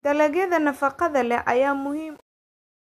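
From 1.66 s to the end at 2.81 s, the speech fade-out shows truncation distortion on a fade. The fade stage keeps too few bits and applies no dither, so the falling waveform collapses into coarse square steps, consistent with roughly 9-bit resolution. From 1.98 s onward it turns gritty. Unlike a noise gate chattering, the roughness rides on the sound itself and worsens steadily as the level drops.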